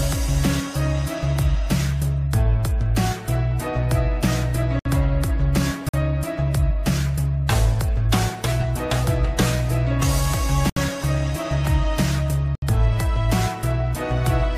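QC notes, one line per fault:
4.79–4.85, 5.89–5.94, 10.70–10.77, 12.55–12.62 s: block of digital silence. Abrupt 46–70 ms dropouts, the shortest fitting a 2048-sample unfilled buffer. They show as flat silent gaps.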